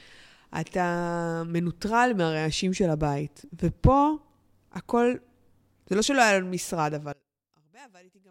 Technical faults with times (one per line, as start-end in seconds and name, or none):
7.13-8.30 one channel inverted